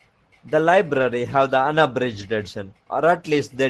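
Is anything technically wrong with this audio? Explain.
Yes. Lost packets rebuilt from error correction at 0.93–1.03 s (about 60 ms, consistent with three 20 ms packets) and 2.19–2.21 s. Low-bitrate backup copies fill them, so they sound briefly rough and noisy, not silent or smeared like concealment.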